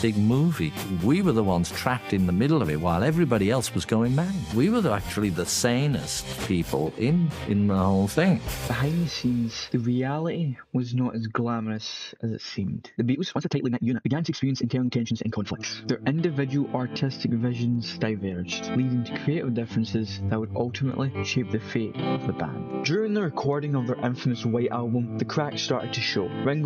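From 13.1 s to 15.66 s there is a time-stretched section. The pace jumps abruptly to about twice normal speed, near 1.97 times, while the pitch stays the same. The sound turns rushed. At 15.66 s the normal pace returns just as suddenly. The likely cause is software squeezing this stretch to fit a shorter length. It kept the pitch by dropping short pieces of the audio.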